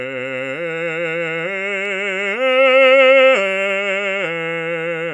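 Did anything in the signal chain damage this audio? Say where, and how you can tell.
No, nothing in the signal chain audibly damages this music. No stage between capture and playback leaves a mark that can be heard or pinned to a moment in the clip.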